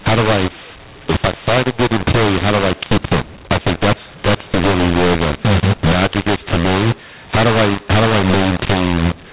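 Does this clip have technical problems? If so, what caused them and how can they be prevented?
Yes. A mu-law and A-law mix-up runs through the whole clip: the speech was coded with A-law but decoded as mu-law, so sample levels come out scrambled, giving harsh, distorted speech and noise-filled pauses where quiet samples are lifted above silence. The telephone band itself, limited to 4 kHz at 8 kHz sampling, sounds as expected. To prevent it, make sure both ends of the G.711 link agree on the companding law, and label or negotiate it rather than assuming it.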